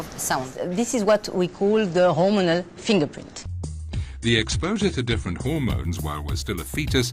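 From 1.47 s to 5.47 s the adaptive stream falls to a lower bitrate after the connection slowed, which fits a switch from 96 to 32 kbit/s. Nothing remains above 9.8 kHz and codec artefacts thicken. Unlike a dropout, the sound never stops.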